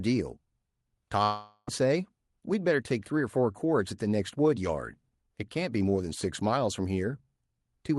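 A speech clip with a long network dropout from 1.23 to 1.69 s: the sound smears into a fading buzz, then goes briefly silent before speech resumes, likely from lost packets over the Opus call path, which tops out around 12 kHz.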